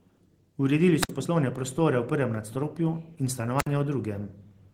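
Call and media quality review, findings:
Wireless microphone squelch dropout at 1.00–1.11 s and 3.58–3.67 s: hiss rises, then about 60 ms mute as the receiver squelch closes on the fading RF signal.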